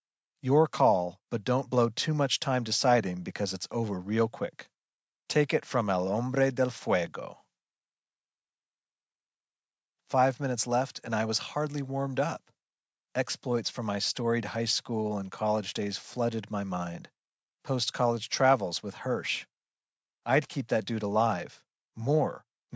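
No technical faults can be heard in the speech, which carries the normal marks of a call's microphone processing: the lowest bass is trimmed away and nothing reaches above 8 kHz.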